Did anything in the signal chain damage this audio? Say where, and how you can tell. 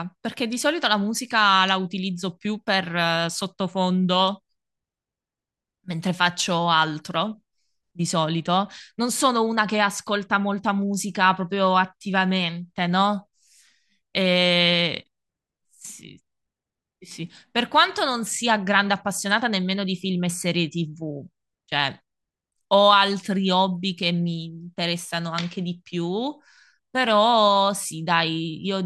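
No, nothing in the signal chain damaged this speech.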